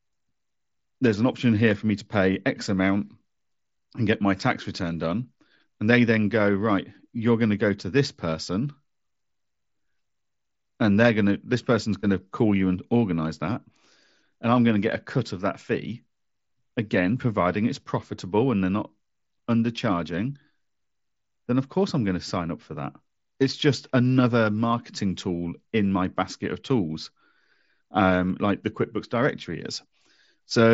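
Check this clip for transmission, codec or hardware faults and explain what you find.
Nothing wrong turns up here; the speech comes over the Bluetooth mSBC headset link just as that wideband codec normally carries it, with the top end stopping at around 8 kHz.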